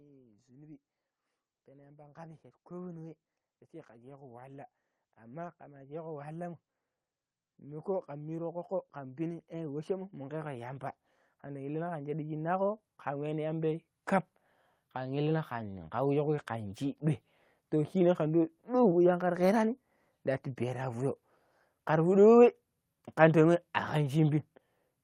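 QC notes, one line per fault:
1.65–3.26 s, 3.86–6.60 s and 7.64–13.85 s: automatic gain rising. The gain control judged the input too quiet and ramped its gain up, by about 3, 6 and 13 dB, so voice and background noise swell together, each climb gradual rather than a step.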